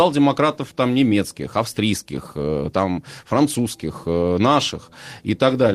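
No technical faults can be heard anywhere in the recording.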